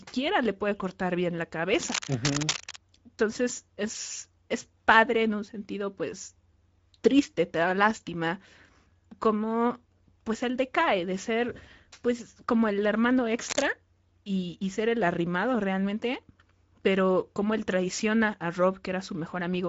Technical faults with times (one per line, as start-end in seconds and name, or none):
0.00-19.68 Speex codec
1.82-2.80 cable scratch noise
13.48-13.66 cable scratch noise